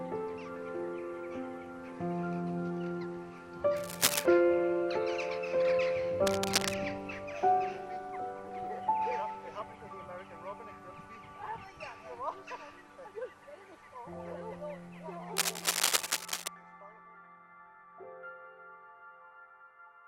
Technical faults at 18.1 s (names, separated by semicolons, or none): none